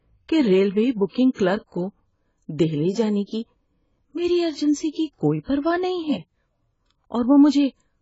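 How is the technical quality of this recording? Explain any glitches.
Quality is poor throughout the speech: it sounds dull and smeared, with a warbling, fizzy texture and nothing above 7.7 kHz, likely from heavy AAC compression. At a very low bitrate, which fits around 16 kbps, the encoder lowers its cut-off and leaves spectral holes.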